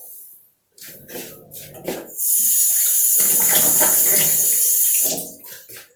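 Sounds carrying generation loss throughout: swirly, hollow smearing and blurred attacks, likely from about four Opus passes near 48 kbit/s, showing as accumulating noise with nothing above 20.5 kHz on a spectrogram.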